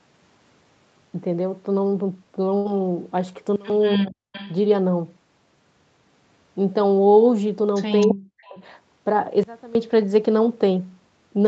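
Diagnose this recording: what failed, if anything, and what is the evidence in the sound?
On the network side, a burst of packet loss hit the stream at 2.57 to 2.67 s. The receiver concealed it by extending the last speech for about 75 ms while fading it to a buzzy or hissy tail. About 80 ms of speech is then simply missing when the audio resumes.

A sudden gain jump, likely from a level setting or bit shift applied in the digital chain without a ramp, drops the level by about 22 dB at 3.56 s and again at 9.43 s. Speech and background noise fall together at once instead of fading, and recover at 3.70 s and 9.75 s.

In call processing, the echo canceller likely misjudged double talk and applied heavy suppression, so the speech is suppressed in double talk. From 3.95 to 4.30 s and from 8.07 to 8.59 s the speech ducks sharply, around 40 dB at its deepest.

The same echo canceller also lets an echo leak through. 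A copy of the speech returns 266 ms late, roughly 15 to 30 dB below the speech. It is heard at 4.32 to 4.55 s, 8.01 to 8.15 s and 8.46 to 8.57 s, likely the residue of loudspeaker pickup it failed to cancel.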